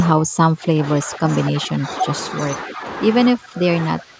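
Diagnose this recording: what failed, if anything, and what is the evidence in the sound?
Speech suppressed in double talk, at the call-processing stage, shows up from 0.13 to 2.06 s, again from 2.65 to 2.84 s, and from 3.33 s to the end. The speech level drops by about 30 dB at its deepest in the first stretch, about 10 dB in the second and about 20 dB in the third. The likely cause is an echo canceller turning down the near talker while the far side speaks. Unlike network packet loss, this comes from call processing rather than the network.

An echo leak, also in call processing, is heard from 1.83 to 1.96 s and from 2.43 to 2.48 s as a faint, delayed copy of the speech, about 25 dB below it and trailing by 246 ms. The likely cause is a loudspeaker-side echo canceller letting residue of its microphone pickup return down the line. The fixed 246 ms offset and the short scraps set it apart from room reverberation, which would decay smoothly from the original.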